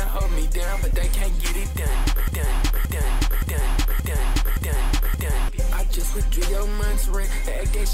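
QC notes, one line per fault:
2.28–5.49 s broken-record loop: the player or stream likely stalled and kept resending the last fragment it held, so a 0.57 s piece of sound repeats exactly, back to back, six times, and the audio that belonged in those three seconds is lost.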